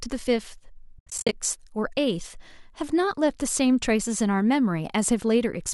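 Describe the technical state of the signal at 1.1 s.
The speech breaks into soft-faded gaps from 0.99 to 1.33 s, the longest about 70 ms. This is AAC frame loss with muting: missing frames were silenced and the overlapping windows smoothed the edges.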